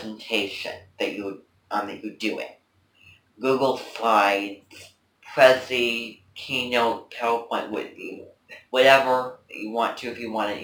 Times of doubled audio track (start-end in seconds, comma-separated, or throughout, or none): none